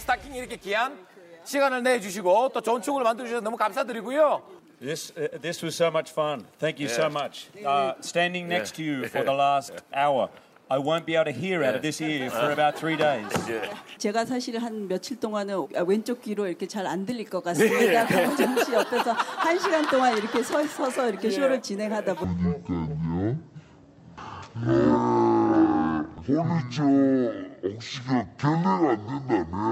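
From 22.24 s to the end at 29.72 s, a section at the wrong speed plays at 0.5x, dropping the pitch by around ten semitones, most likely from a clock mismatch during editing or playback. On a spectrogram, harmonics crowd lower and every feature stretches out in time.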